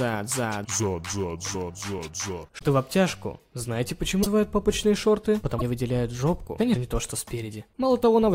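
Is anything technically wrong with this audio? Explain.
Yes. At 2.58, 4.22, 5.58 and 6.73 s the sound skips forward and leaves a brief garbled chirp, noise burst or short hole, roughly 30 to 45 ms each, about one or two frames of about 26 ms. The likely cause is a broken MP3 bit reservoir: after frames went missing, the next frame reached back for borrowed data and decoded bytes from the wrong frame. A plain dropout would only leave a gap; here the audio also jumps ahead.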